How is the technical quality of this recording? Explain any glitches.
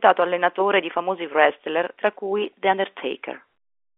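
No glitches can be heard in this speech recording. It has the narrow telephone band of G.711 telephone coding, with nothing below about 250 Hz or above 3.5 kHz, and any quantisation noise from the 64 kbps A-law line is faint and follows the level of the speech.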